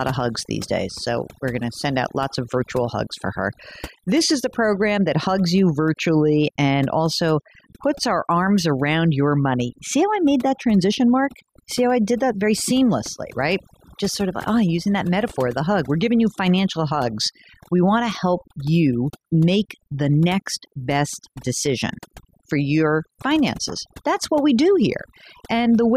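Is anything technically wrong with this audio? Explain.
Yes. Throughout the speech, overdone noise removal: an overly aggressive noise reducer shut off bands near its noise estimate, leaving twinkling near-silent gaps.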